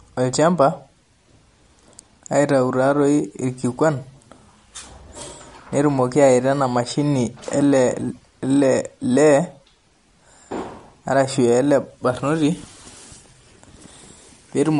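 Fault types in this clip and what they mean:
MP3 compression: Throughout the speech there is plainly audible codec damage, with a watery, swirly texture, metallic chirps on s sounds, and nothing at all above 11.2 kHz, so the top end sounds cut off. This is likely MP3 encoding at a low rate, consistent with about 48 kbps. Short of bits, the encoder chops off the treble at a fixed frequency and drops weak frequency lines that flicker on and off between frames.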